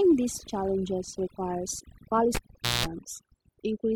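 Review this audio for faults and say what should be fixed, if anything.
Overdone noise removal runs throughout. An aggressive noise reducer gates frequency bands near its noise estimate, leaving twinkling specks in the background.

A cable pulled and plugged in occurs from 2.35 to 2.86 s, after "these challenges requires". A pop opens a 0.46 s dropout. Then 0.19 s of 60 Hz mains buzz sounds while only the tip touches. A second pop follows.

Prevent both by setting noise reduction gently and securing live cables before recording.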